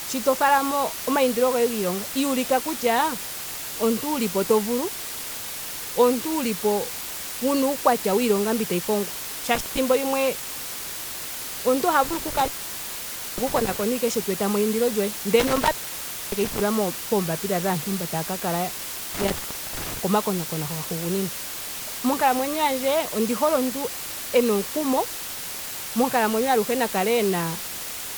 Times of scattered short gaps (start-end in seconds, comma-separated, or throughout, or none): none